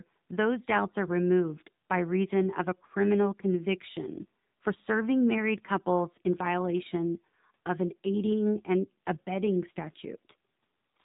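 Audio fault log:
throughout AMR narrowband mobile codec: speech went through low-rate mobile coding, consistent with 7.4 kbps AMR-NB, removing everything above 4 kHz and leaving it muffled, buzzy and clearly synthetic.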